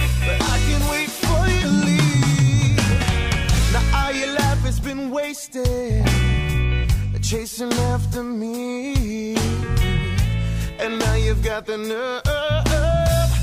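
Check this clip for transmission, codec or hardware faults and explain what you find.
The clip has two cases of compressed frames skipped, at 1.60 to 1.64 s and 3.00 to 3.04 s. Whole blocks of encoded audio were either missing or rejected by the decoder as damaged, so playback jumps forward. The first jump loses about 50 ms, which fits one 46.4 ms frame. The second loses about 100 ms, which points to two frames. Each join is heard as a small jump in the sound.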